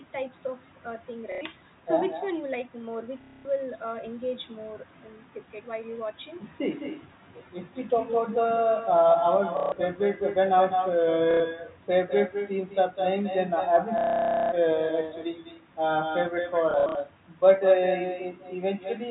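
A telephone speech recording carried over G.711, with everything above 4 kHz gone. It has echo with no canceller throughout. A copy of the speech returns about a fifth of a second later, about 7 dB down and thinner. A far-end loudspeaker is feeding its microphone, and nothing removes it. There is also packet loss with the last packet repeated, at 1.32, 3.21, 9.57, 11.31, 13.98 and 16.71 s. These stutters last 90 to 540 ms, and the longest comes at 13.98 s. At 16.71 s the gaps are scattered over 240 ms. The receiver loops the last audio, giving robotic buzzes whose timing fits 30 ms packets.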